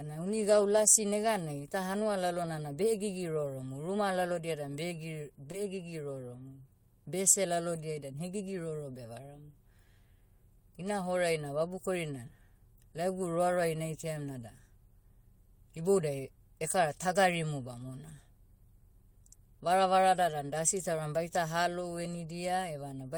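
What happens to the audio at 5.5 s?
Around 5.51 to 5.55 s there is a short concealed packet loss. About 20 ms of audio failed to arrive, and the receiver bridged it by extending the preceding sound for roughly 18 ms before blending back. It is heard as a brief smear or wobble. A spectrogram shows the harmonics or noise smoothly continued across the gap.

From 5.53 to 5.55 s, a lost packet was rebuilt from error correction. Those 20 ms, which fit a single lost packet, were restored from a low-bitrate redundant copy carried in the next packet, so nothing drops out, but the frame sounds rougher and noisier. On a spectrogram this appears as a thin, grainier slice, and the waveform has no gap.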